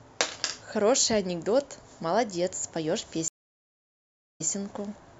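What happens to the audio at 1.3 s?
Nothing goes wrong at 1.3 s: the speech runs through that moment intact, with no dropout, click or other fault.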